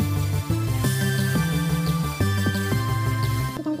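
The audio was read two samples at a time (double speed), with sample pairs taken as single frames, so from start to end it plays twice as fast and an octave higher.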